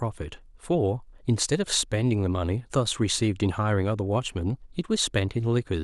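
No faults are audible anywhere in the speech.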